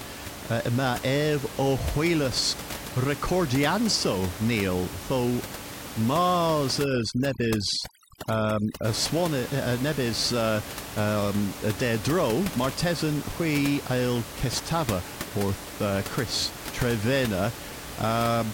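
From 6.84 to 8.85 s the speech passes through overdone noise removal. A noise reducer set far too hard pushes any frequency band near its noise estimate almost to silence. Here the room noise, otherwise about 12 dB below the speech, drops to near silence with twinkling specks, and the speech loses its quieter components as they are stripped away. A spectrogram shows scattered isolated dots and gaps between harmonics, and the waveform's noise floor flattens abruptly.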